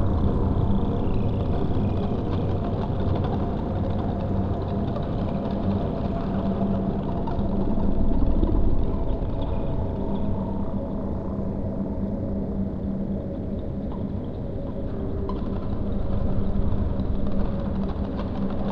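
From 6.61 s to 9.49 s there is a time-stretched section. The sound suddenly runs about 1.45 times faster, then returns to its normal pace, and it turns rushed. The likely cause is software squeezing that stretch to fit a shorter length by dropping short pieces while holding pitch. Unlike a simple playback-speed change, the pitch here stays where it was. Only the tempo jumps.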